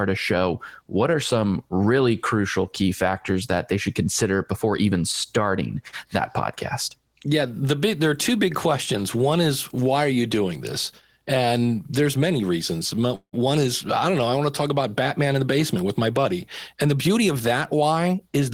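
At 13.15 to 13.35 s, between "there's many reasons" and "is I don't know", a call audio freeze inserts a fading buzz, then silence, likely from stalled packets. Unlike a dropout, nothing is lost and the speech simply resumes. After "want to talk about", a jitter buffer speed-up runs 9% fast from 15.19 to 16.33 s, then 5% fast from 16.74 to 17.75 s. The speech sounds hurried but keeps its pitch, unlike a resampling error.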